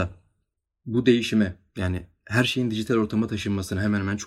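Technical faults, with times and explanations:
No technical faults can be heard anywhere in the speech recording.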